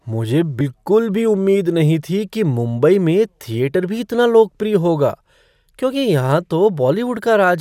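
At 0.58 to 0.61 s the speech is broken by a brief glitch lasting about 30 ms, the sign of damaged data in a compressed stream. Some of the coded bytes there are wrong, so the decoder misreads those frames, loses its place and hunts for the next valid frame header before resuming. Unlike a plain dropout or a single click, this comes from misread coded frames rather than from a gap or tick in the signal itself.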